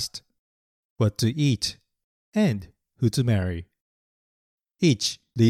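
No technical faults can be heard anywhere in the recording. Nothing in the chain that carried the audio draws attention to itself at any point.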